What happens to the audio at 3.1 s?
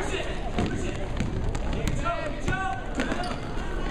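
Likely interference injects pulses: a train of clicks from 2.24 s to the end ticks evenly 14.6 times a second, as loud as the sound.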